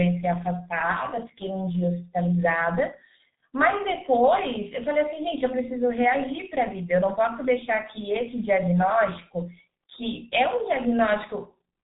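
Speech carrying heavy G.723.1 codec damage throughout: nothing above 3.8 kHz, a hoarse, muffled tone and smeared consonants, consistent with a roughly 6.3 kbit/s stream. Unlike simple low-pass filtering, the slowly updated voice model adds roughness and blurs transitions between sounds.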